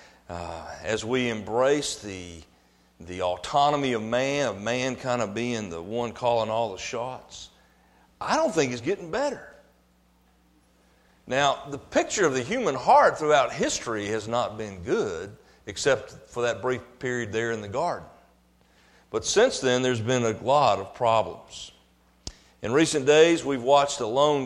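No technical faults are audible anywhere in the clip.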